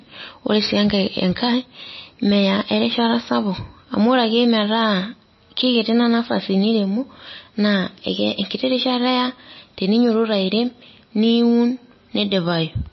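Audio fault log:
Throughout: MP3 compression. The speech sounds watery and swirly, with metallic chirps on s sounds, smeared consonant attacks, and nothing above 5.8 kHz, so it is dull. This is likely heavy MP3 encoding at a bitrate near 24 kbps. Short of bits, the encoder removes all treble above a fixed cutoff and discards quiet frequency components. Those components then flicker on and off between frames, which produces the swirling texture.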